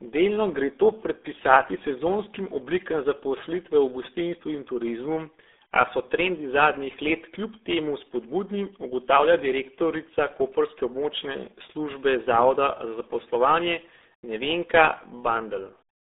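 Throughout, RealAudio 14.4 codec damage removes everything above 3.8 kHz and adds a heavy gargling warble that plain telephone band-limiting lacks, fitting an 8 kbit/s stream.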